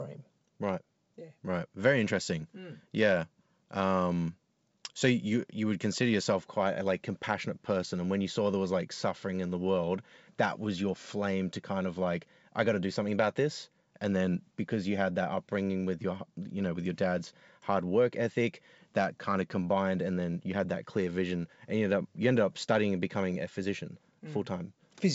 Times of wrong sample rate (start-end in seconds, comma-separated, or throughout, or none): none